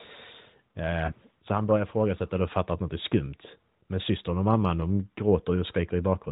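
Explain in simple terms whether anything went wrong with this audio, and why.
Around 1.06 to 1.13 s, a radio error spoiled a small chunk of speech data, so the decoder covered the gap by repeating its last good settings more quietly. These lost AMR speech frames cause a brief dip or warble, consistent with one lost 20 ms frame.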